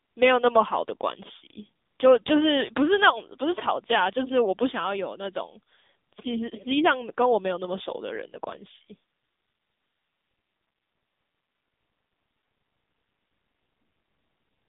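AMR narrowband mobile codec damage runs through the whole clip, from start to finish. The speech sounds squeezed into a telephone band of roughly 150 Hz to 3.6 kHz, with nothing above 3.7 kHz. The codec rebuilds each 20 ms frame from a vocal-tract model fed by a few pulses, and here that rebuilding is plainly audible as a buzzy, synthetic edge on the voice, which fits a low AMR-NB mode of around 8 kbps.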